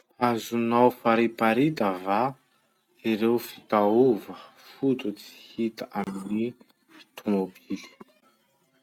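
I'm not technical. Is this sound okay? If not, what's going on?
No. At 6.04 s the speech cuts to silence for about 30 ms, until 6.07 s, then carries on. This is likely a Bluetooth stall. Radio interference delayed the audio, so the headphones briefly ran out of sound to play.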